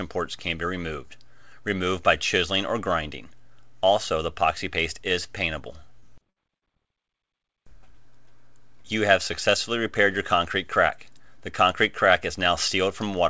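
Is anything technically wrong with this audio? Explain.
Yes, there's a cluster of dropouts in the call audio, all within about 6.0 to 6.64 s, over a path whose cutoff at 8 kHz points to a G.722-style wideband codec.

Short concealed packet loss hits twice, from 6.00 to 6.04 s and from 6.58 to 6.64 s. The receiver stretched the preceding sound across each 20 to 40 ms gap, so you hear a quick smear or wobble.

A burst of packet loss runs from 6.30 to 6.38 s. About 60 ms never arrived, so the concealment extended the last sound and faded it into a brief buzz or hiss before the audio picks up further on.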